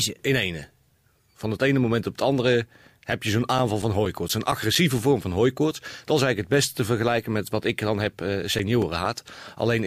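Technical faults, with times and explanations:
3.12 to 5.22 s: CD scratch ticks, ten regular clicks about five a second, up to around 10 ms each. A blemish beats error correction once per disc turn, so the player patches or mutes.
7.89 to 9.29 s: CD scratch ticks again, seven shorter clicks of just a few ms, same once-per-revolution rhythm from damage the error correction can't rebuild.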